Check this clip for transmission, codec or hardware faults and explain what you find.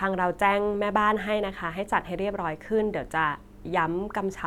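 Checking this speech clip turns up no faults to explain.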